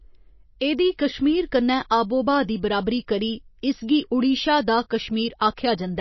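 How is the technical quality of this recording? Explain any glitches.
The recording has plainly audible compression damage across the whole of the speech, most likely from MP3 encoding at a low bitrate. Throughout the clip nothing is present above about 5.8 kHz, where the encoder has cut the treble to save bits, and weaker frequency components drop in and out from frame to frame. The result is a watery, swirling texture with metallic chirps on s sounds and smeared consonant onsets. An MP3 codec this starved points to a bitrate somewhere near 27 kbps. A simple low-pass filter would dull the top end in the same way but would leave the remaining sound steady, whereas here the flickering, bubbly artefacts inside the band show that a codec is at work.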